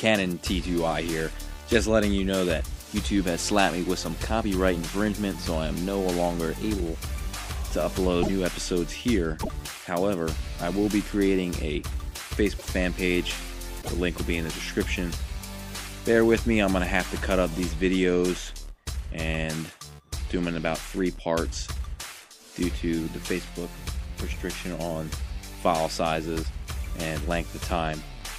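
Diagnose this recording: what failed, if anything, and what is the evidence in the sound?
Broken MP3 bit reservoir at 8.22 to 8.30 s, 9.42 to 9.49 s, 12.58 to 12.66 s and 13.81 to 13.89 s: each is a 70 to 85 ms burst where the sound jumps forward and comes out garbled, spanning about three frames of roughly 26 ms. This points to the codec stage, likely frames dropped from the stream, so the next frames reach back into the reservoir for data that now belongs to other frames.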